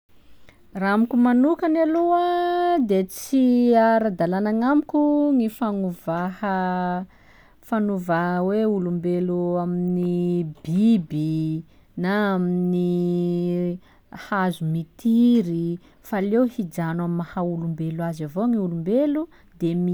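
No technical faults detected.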